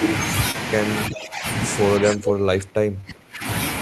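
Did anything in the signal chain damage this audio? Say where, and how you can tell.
Yes. The network dropped audio twice. Short concealed packet loss is audible at 0.51 to 0.56 s and at 3.01 to 3.05 s. Each gap is a brief smear rather than a clean cut. About 20 ms of data never arrived each time. The decoder covered the first hole with about 26 ms of synthesised sound and the second with about 20 ms. It extended the preceding sound, then crossfaded back into the real signal.

The level collapses twice in the call-processing stage. From 1.09 to 1.46 s the speech dips by roughly 15 dB. From 2.00 to 3.47 s it sinks further, by about 25 dB at its deepest, for around a second and a half. The pattern points to speech suppressed in double talk as the likely cause. The echo canceller could not tell this talker from loudspeaker echo while both sides spoke. So it attenuated everything.

A faint delayed copy of the speech appears from 2.07 to 2.13 s. 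It trails the original by about 0.38 s and sits about 15 dB below it. This is echo leak. It likely comes from a loudspeaker at one end, where the echo canceller failed to remove all of what the microphone picked up. It falls inside the second suppressed stretch.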